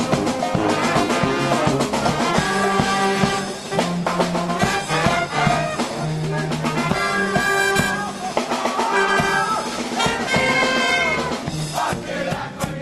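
No technical faults can be heard: the sound comes through an ordinary call path, with the Opus codec's usual coding character and its top end extending to about 12 kHz.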